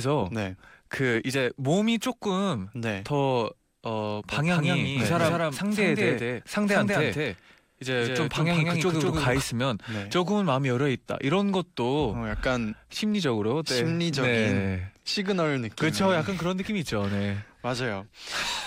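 Doubled audio track, 4.32–9.42 s: the speech plays twice, about a fifth of a second apart at similar level, likely from a lagging capture path.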